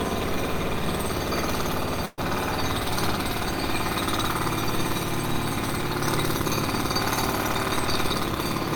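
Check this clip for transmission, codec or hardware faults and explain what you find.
There's one fault, a burst of packet loss at 2.05 to 2.2 s. The receiver held the last bit of sound for about 120 ms and faded it out, then went silent for about 10 ms. When audio resumes, roughly 120 ms of material has been skipped.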